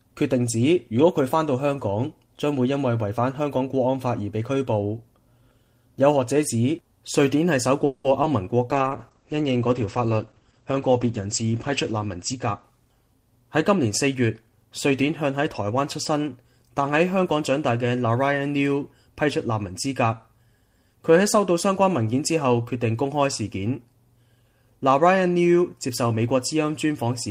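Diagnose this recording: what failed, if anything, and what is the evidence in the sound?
Call audio freeze, 7.85 to 8.06 s. The last sound is carried on as a fading buzz or hiss for about 0.19 s, then the audio resumes exactly where it left off, with nothing missing. The stage is the network: delayed packets likely drained the receiver's jitter buffer, which then stretched its last output to fill the gap.

Short concealed packet loss, 8.22 to 8.25 s. A brief smear lasting a few hundredths of a second follows just after the freeze. About 20 ms of audio never reached the decoder in time. The receiver extended the preceding sound to cover the hole, then blended back into the real signal.

Call bitrate drop, 8.72 to 13.65 s. The sound turns rough and muffled. The top end narrows from about 20 kHz to 8 kHz as the encoder falls from 32 to 11 kbps, and it stays at that lowest rate for about 3.2 s. 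This is the codec responding to a reduced network bandwidth estimate.

Jitter buffer speed-up, 12.33 to 14.91 s. The audio runs about 6% fast at unchanged pitch and sounds slightly hurried. The receiver's buffer held excess audio, so it repeatedly cut out short pitch-period chunks, around 150 ms in total, to bring latency back down.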